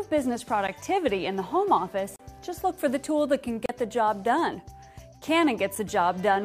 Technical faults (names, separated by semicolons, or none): block of digital silence